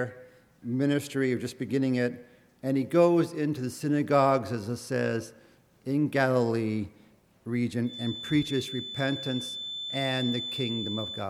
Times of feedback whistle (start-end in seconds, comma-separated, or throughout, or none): 7.81-11.29